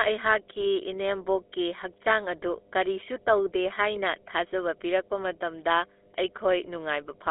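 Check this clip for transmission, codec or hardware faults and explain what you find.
Two faults run through the whole recording: mains hum and GSM full-rate codec damage.

Mains hum, present from start to finish: a ground loop or nearby transformer is leaking the power line into the signal path. It sounds like a steady 50 Hz drone with low harmonics, sitting roughly 20 dB under the speech.

GSM full-rate codec, also throughout: the speech has passed through the original GSM coder, which fits its 13 kbps rate. That coder rebuilds the voice from a vocal-tract model driven by sparse, regularly spaced pulses, and the line is limited to 300 Hz to 3.6 kHz. The result is plainly audible buzzy, gravelly roughness and a thin, muffled telephone tone.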